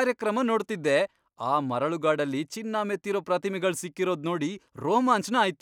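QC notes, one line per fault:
No faults detected.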